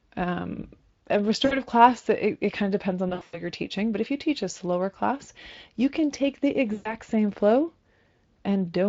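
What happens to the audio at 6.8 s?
At 6.73 s, right after "you can take the", VoIP packet loss concealed by the speech codec begins. It lasts until 6.96 s, before "same flow". About 120 ms is lost. The decoder extends its last pitch and filter with falling gain, so the speech smears into a fading buzzy tone or coloured noise.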